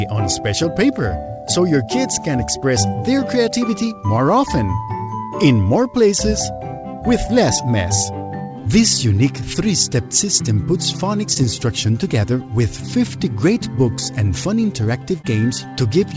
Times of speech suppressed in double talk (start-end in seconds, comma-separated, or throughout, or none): none